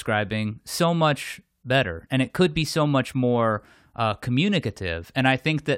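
No audible technical faults turn up anywhere in the recording.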